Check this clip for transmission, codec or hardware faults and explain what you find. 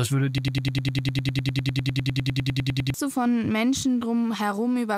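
Two faults are present: a broken-record loop early in the speech and a DECT cordless phone buzz running under the whole clip.

From 0.38 s to 2.94 s there is a broken-record loop. The player or stream likely stalled and kept re-sending the last fragment it held, a slice of about 0.1 s (100.8 ms), which repeats 25 times back to back. The speech that should have filled those two and a half seconds is gone, replaced by a rapid, mechanical stutter of one tiny sound fragment until normal playback resumes.

The DECT cordless phone buzz runs throughout. A nearby DECT handset or base station transmits a short radio burst every 10 ms, and the audio circuitry rectifies that energy into the signal path. The result is a steady, thin buzz at 100 Hz, rich in harmonics, sitting roughly 40 dB below the speech. It is faint but constant.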